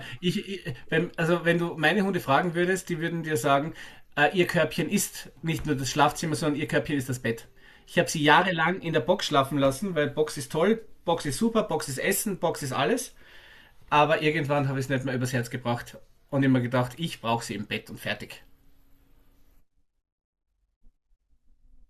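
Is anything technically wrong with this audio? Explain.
No, nothing technically wrong can be heard anywhere in this speech recording.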